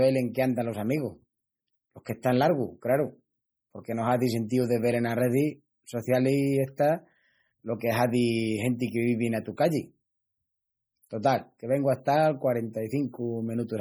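Speech throughout with heavy MP3 compression artefacts: the sibilants come out chirpy and metallic, the background swirls as weak frequency lines drop in and out between frames, and consonant attacks smear. That damage likely comes from a low bitrate, around 32 kbps.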